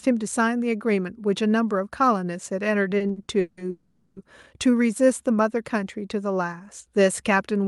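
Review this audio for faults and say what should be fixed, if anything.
Repeated stalls (stutter) from 2.97 to 3.62 s: the jitter buffer emptied six times, the longest wait 170 ms, so the last sound was stretched over about half that span. A larger adaptive jitter buffer and a steadier network path would prevent this.

Call audio freeze from 3.70 to 4.18 s: sound is held and continued for 0.46 s without going silent, likely from packets delayed in transit, then resumes where it stopped. Prioritising audio traffic with QoS would prevent it.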